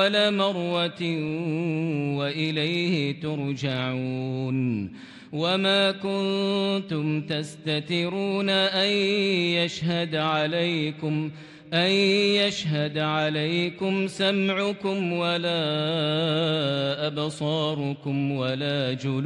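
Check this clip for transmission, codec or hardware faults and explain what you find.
Checking this clip turns up no faults to explain.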